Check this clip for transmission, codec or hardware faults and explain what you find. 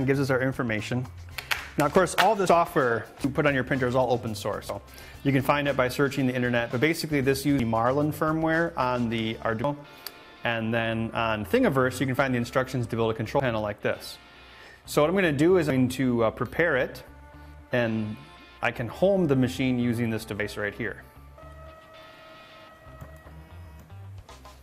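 Eight abrupt jumps, at 2.48, 3.24, 4.69, 7.60, 9.64, 13.40, 15.70 and 20.40 s, each skip the sound forward with no gap, skipping roughly a tenth to a third of a second. This is likely a dropped buffer (overrun): samples were overwritten before being read, and the two sides were spliced together.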